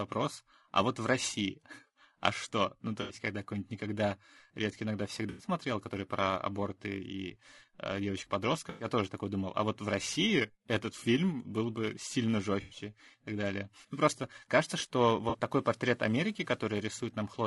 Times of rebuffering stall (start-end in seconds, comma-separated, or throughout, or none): none